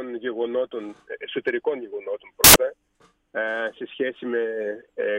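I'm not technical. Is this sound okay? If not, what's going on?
No. For a short moment, from about 2.44 to 2.56 seconds, the playback system reads the audio data incorrectly. This fault is called samples built from the wrong bytes: each tiny piece of the sound is stored as a group of bytes, and here those bytes are assembled wrongly, so the fine, fast-changing detail ends up in charge. For that fraction of a second, the sound turns into a loud burst of harsh noise before returning.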